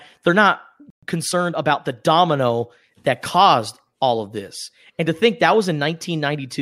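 At 0.90 s the speech just drops out for about 120 ms, a playback stall, likely the player starving for data, before picking up where it left off at 1.03 s. From there to 1.83 s you get time-compressed catch-up: the player trims its backlog by splicing out tiny slices, so the speech runs about 1.15 times fast at normal pitch.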